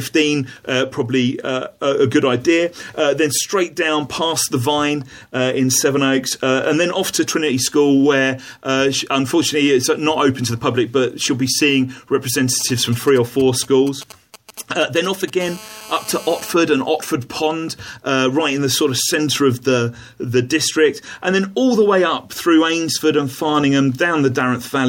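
From 12.60 to 15.30 s, GSM signalling bursts break in: a galloping dit-dit-dit of short buzzes sitting roughly 20 dB under the audio. A nearby 2G handset is exchanging short control transmissions with the network, and the audio circuitry rectifies each group of radio pulses, which repeat at about 217 Hz, into sound. What separates this from the steady call buzz is its stop-start rhythm: short grouped bursts with gaps between them.

From 15.41 to 16.52 s the interference turns into a continuous GSM phone buzz, about 18 dB below the audio. The handset has moved into call mode and now transmits its bursts without a break, 217 times a second. Rectified, they give a hard, raspy tone at 217 Hz, thick with harmonics and unrelated to anything else in the audio. Unlike the signalling section before it, the buzz stays nearly steady, with no galloping pattern.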